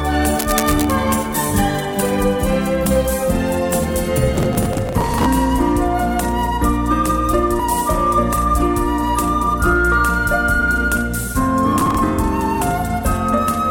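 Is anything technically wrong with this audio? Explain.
Yes, there are three kinds of fault.

From 0.39 to 0.92 s a rough, uneven scratching and rustling rides over the sound, about 10 dB below it. This is cable scratch noise. It is likely caused by a worn cable, connector or control being moved, so that its contact resistance jumps around rapidly and adds dense, irregular bursts of noise on top of the signal for that half second.

From 4.34 to 5.26 s, and again more briefly from 11.76 to 11.99 s, there is a gritty, tearing crackle that stops abruptly. This is processor overload crackle. The processor fell behind and missed a long run of deadlines for very short audio buffers, each only a few milliseconds long, which fits buffers of around 3 ms. Each missed buffer was simply skipped. The result is a rapid string of tiny gaps with hard edges, many dozens in the longer burst and a couple of dozen in the shorter one.

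At 7.60 s a single brief chirp or blip interrupts the sound. This is damaged data in a compressed stream. Part of the encoded data at that point was corrupted, so the decoder misread the affected frame, lost its place and had to search for the next valid frame header. That sudden decoding error produces the short synthetic blip.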